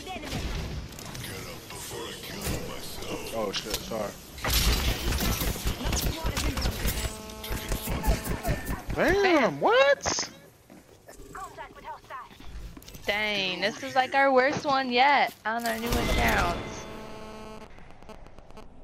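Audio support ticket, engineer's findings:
GSM phone buzz, 6.96–8.52 s and 15.83–17.59 s: raspy 217 Hz buzz, rich harmonics, about 15 dB below signal. Phone in a call nearby; input stage rectifying its bursts. Harsher than mains hum, wrong fundamental.

GSM signalling bursts, 17.61–18.63 s: even ticks with a longer 217 Hz buzz twice a second, at a similar level. Phone in a call with its user silent; bursts intermittent, unlike the steady buzz.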